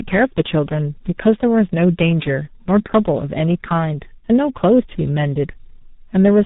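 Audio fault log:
throughout tandem speech coding: rough, muffled, warbly speech with nothing above 3.8 kHz. This fits two speech codecs in a row, the second re-coding the first's damage.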